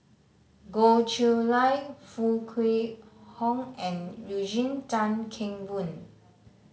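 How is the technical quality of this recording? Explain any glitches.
The recording's technical quality shows no glitches to explain.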